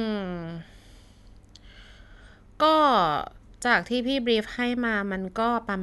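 No technical fault can be heard anywhere in the speech signal, which stays continuous and intact throughout.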